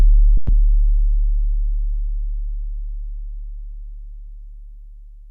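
From 0.37 to 0.51 s there is a call audio freeze, most likely caused by packets stalling in transit so that the jitter buffer at the receiving end ran dry. To cover the wait, the receiver stretched the last sound into a fading buzz or hiss lasting about 110 ms, with no drop to silence. When the audio resumes, it picks up exactly where it left off, so nothing is lost, but everything after that point plays about 110 ms late.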